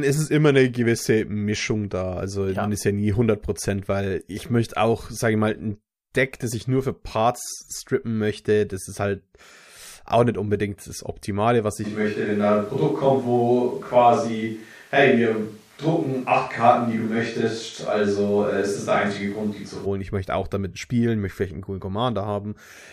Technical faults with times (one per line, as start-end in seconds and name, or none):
11.86-19.85 switch to a distant microphone